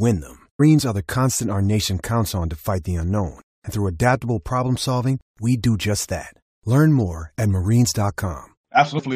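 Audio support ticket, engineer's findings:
Brief digital blip in the speech at 0.6 s, just before "are the constant our". Probable component: decoder input. Damaged data in the compressed stream; corrupted bytes in a frame make the decoder misread it, lose sync and resync at the next header.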